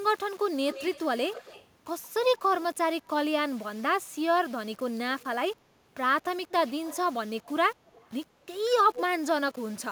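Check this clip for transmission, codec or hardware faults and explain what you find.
Two faults are present: a coarse, grainy quantisation running through the whole speech clip, and several brief returns of delayed speech.

Low bit depth without dither, throughout: the signal was likely rounded to about 7 bits with no dither, so the error tracks the speech. Quiet syllables and decays turn gritty and sputtery, with distortion sitting roughly 30 dB below the speech.

Echo leak at 0.69–1.04, 1.32–1.66, 2.32–2.38, 6.67–6.97, 7.87–8.09 and 8.94–9.01 s: a far-end echo canceller likely let its loudspeaker pickup through. A copy of the speech returns 172 ms late, between roughly 10 and 30 dB down, in short scraps.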